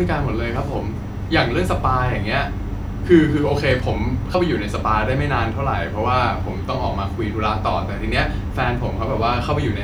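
A single frame of the compressed stream never reached playback in this speech clip, either missing from the file or rejected by the decoder as damaged, so compressed frames were skipped at 4.34 s. The 92.9 ms frame means about a tenth of a second of speech vanishes.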